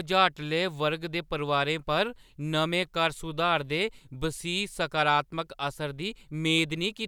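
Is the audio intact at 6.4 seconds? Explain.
Yes, the speech at 6.4 seconds is intact, with no dropout, click, distortion or other technical fault at that moment.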